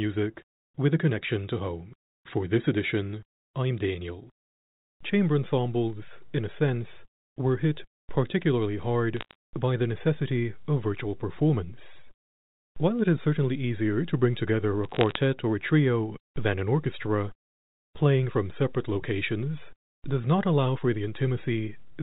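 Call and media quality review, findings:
Bit errors on a digital phone line, 9.17–9.35 s and 14.84–15.18 s: flipped bits, a few tenths of a percent, corrupt single G.711 mu-law samples, giving sharp ticks and crackle over otherwise intact speech.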